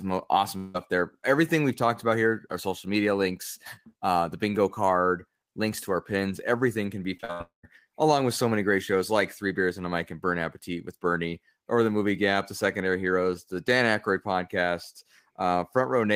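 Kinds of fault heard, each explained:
Long network dropout: audio stops arriving, likely from a network stall; at 0.57 s and after "pins everything can be" at 7.41 s, a fading buzz fills the gap before "along with so many", showing as smeared, decaying bands then a blank waveform.
Repeated packet loss (robotic sound): four short holes between 7.17 and 7.41 s, the longest 69 ms, are patched by repeating sound, giving choppy speech with pieces missing and striped, repetitive spectrogram texture.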